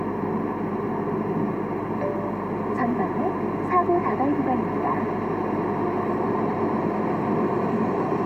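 Mains hum runs under the whole recording: a steady 50 Hz tone, roughly 20 dB below the sound itself, leaking in from the power line through a ground loop or nearby transformer. Unlike rumble or wind noise, it never wavers in pitch, and its low harmonics sit at exact multiples of 50 Hz.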